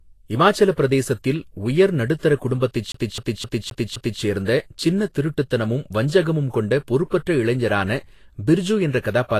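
A lossy codec, likely Vorbis at a low bitrate in the region of 34 kbps, has coarsely quantised the treble throughout the speech and removed everything above 14.2 kHz, so fine detail turns to hiss and graininess, tones sound rough and consonant onsets are blurred.

From 2.92 to 4.22 s the playback behaves like a CD stuck on one turn: the pickup jumps back to the same point each revolution, so a 0.26 s fragment repeats five times, with a brief mute at every jump, giving a quick, evenly spaced stutter.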